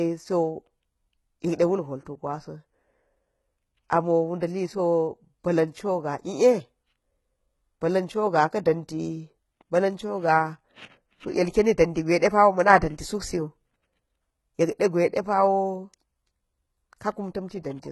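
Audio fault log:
Throughout, HE-AAC compression: The speech is heavily damaged by coding. Nothing is present above about 11.8 kHz. The treble is still present, but it is not the original. It has been rebuilt from copies of lower bands, shaped only by a coarse envelope. Harmonics fail to line up where the coded band meets the rebuilt one, so s sounds turn gritty and metallic. The likely cause is a very low bitrate, around 16 kbps.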